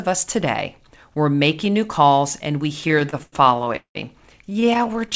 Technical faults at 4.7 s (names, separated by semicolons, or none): repeated stalls (stutter)